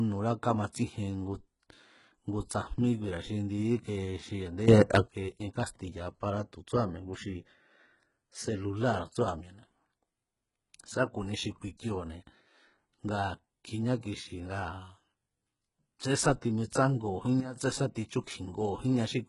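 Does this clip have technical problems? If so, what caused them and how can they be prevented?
Yes. Heavy damage runs through the whole clip, likely from HE-AAC compression. Nothing remains above 11.1 kHz. The treble is rebuilt from copied lower bands, so its harmonics don't line up with the original. This fits a very low bitrate near 12 kbps. Encoding at a higher bitrate prevents it.

There is a sudden gain jump from 4.68 to 5.08 s, just after "ndi íke xi a̱ndé". The level rises by about 13 dB. Another jump from 17.4 to 17.56 s drops it by about 12 dB. Both sound like a gain change applied without a ramp, and speech and background noise shift together. Ramping every gain change prevents this.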